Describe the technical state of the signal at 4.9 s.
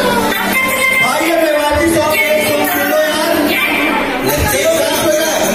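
At 4.9 s the signal is intact, with no dropout, clipping, glitch or other fault to be heard.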